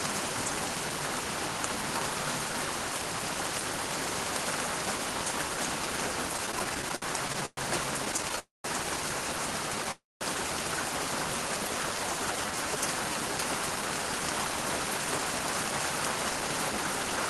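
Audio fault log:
6.37–7.59 s, repeated stalls (stutter): the jitter buffer ran dry 14 times, the longest wait 117 ms, each filled by continuing the last sound, so the audio drags.
8.05–8.39 s, repeated stalls (stutter): six shorter stalls, none over 12 ms, each gap bridged by extending the preceding sound, giving a brief choppy flutter.
8.39–8.66 s, call audio freeze: the sound holds, fades to about 180 ms of silence, then resumes where it stopped, likely from packets delayed in transit emptying the buffer.
9.91–10.23 s, call audio freeze: a similar hold and fade, about 210 ms silent, before the sound picks up again without loss, likely from another transit delay.
11.37–12.78 s, jitter buffer slow-down: repeated pitch periods stretch the sound to about 91% speed, adding 128 ms at unchanged pitch so the buffer can refill.
14.45–17.27 s, jitter buffer speed-up: short pitch-period cuts, roughly 150 ms in total, push playback to about 105% speed at the same pitch, trimming excess delay.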